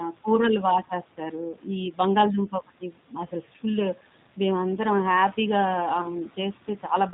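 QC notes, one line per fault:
throughout: G.729 codec. The speech has been squeezed through a low-rate CELP coder running at 8 kbit/s, which rebuilds each 10 ms frame from a vocal tract filter, a pitch predictor and a handful of pulses rather than the real waveform. Everything above 4 kHz is gone, so sibilants lose their edge, and the damage is plainly audible as a rough, slightly synthetic texture on the voice. The room noise sitting about 21 dB under the speech picks up a warbling quality as the coder tries to model it.
6.01 to 6.08 s: VoIP packet loss concealed by the speech codec. About 20 ms of audio went missing, consistent with two lost frames, and the decoder filled the gap by extending its last pitch and filter settings while lowering the gain. That produces a brief stretched, fading sound instead of silence. Because each decoded frame depends on the previous one, the speech stays weak or distorted for a short while after real packets resume.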